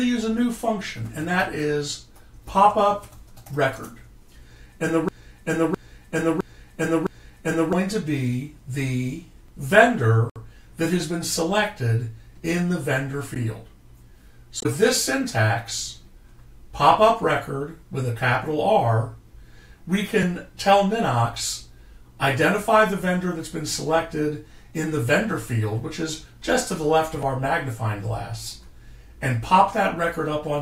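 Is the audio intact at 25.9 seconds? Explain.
Yes, the audio at 25.9 seconds is intact, with no dropout, click, distortion or other fault audible at that moment.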